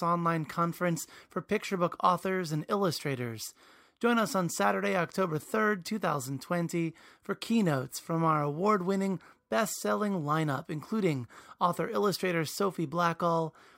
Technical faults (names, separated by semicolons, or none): none